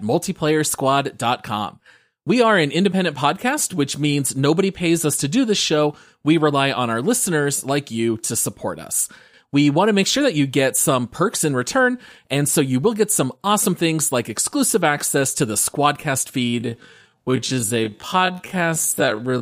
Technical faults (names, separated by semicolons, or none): time-stretched section